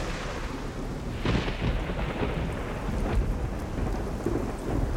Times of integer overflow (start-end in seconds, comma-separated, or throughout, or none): none